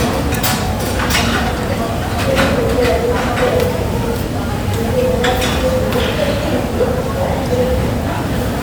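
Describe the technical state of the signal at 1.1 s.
At 1.1 s the audio is intact, with no dropout, click, distortion or other fault to be heard at that moment.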